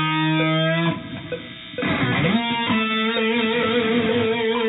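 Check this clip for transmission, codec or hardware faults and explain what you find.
No faults found.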